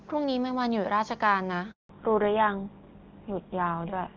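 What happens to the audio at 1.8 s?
A handover gap runs from 1.71 to 1.89 s. The call switches networks, no frames arrive for 180 ms, and the speech cuts out, showing as a flat waveform and a blank spectrogram column. From 1.89 s a fallback to narrowband follows: the spectrogram loses everything above 4 kHz, and the speech sounds duller, which fits a drop to GSM full rate.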